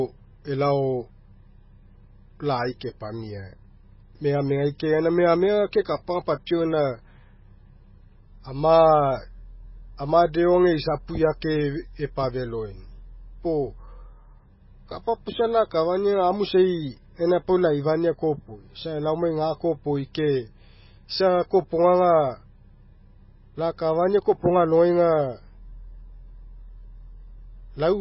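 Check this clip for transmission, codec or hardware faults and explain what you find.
One fault runs through the whole clip. The speech sounds watery and swirly, with chirpy, metallic sibilants, smeared consonant onsets, and nothing above 5.5 kHz. This is likely heavy MP3 compression at a very low bitrate, around 16 kbps. Starved of bits, the encoder cuts the treble at a fixed point and drops weak frequency lines that flicker on and off between frames.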